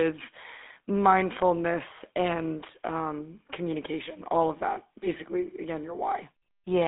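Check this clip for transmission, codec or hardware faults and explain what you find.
There's one fault, running the whole way through: the GSM full-rate codec. It models the vocal tract and drives it with sparse, regularly spaced pulses, which fits 13 kbps. The speech sits in a line band of 250 Hz to 3.6 kHz, nothing above 3.8 kHz, with plainly audible buzzy, gravelly roughness.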